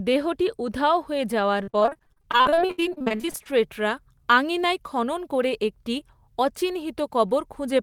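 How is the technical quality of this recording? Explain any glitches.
The recording has one glitch. From 1.63 to 3.47 s, repeated packet loss (robotic sound) hits the speech: dozens of brief holes, up to 67 ms, each filled by stretching the preceding sound, so nearly half that span is patched. It sounds choppy; a spectrogram shows smeared, repeated stripes between broken segments.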